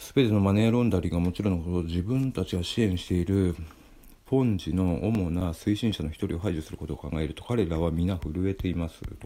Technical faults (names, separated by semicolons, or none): CD scratch ticks